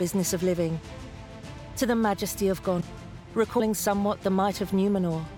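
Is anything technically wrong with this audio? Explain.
Yes. Compressed frames are skipped at 2.80 s and 3.59 s. The audio jumps ahead, by about 0.4 s and then about 0.1 s, which fits whole 24 ms frames being dropped.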